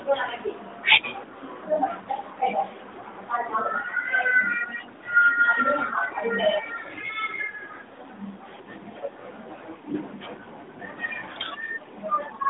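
At 10.44 to 10.48 s a single speech frame failed its checksum, a lost AMR speech frame, and the narrowband decoder's concealment repeated the previous settings at reduced gain, leaving a brief dip or warble.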